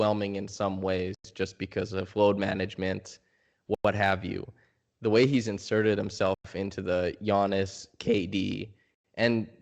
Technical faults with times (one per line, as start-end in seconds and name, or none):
1.15-1.25 gap between chunks
3.75-3.85 gap between chunks
6.34-6.45 gap between chunks
8.95-9.04 gap between chunks